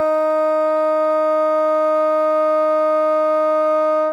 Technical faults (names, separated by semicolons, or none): none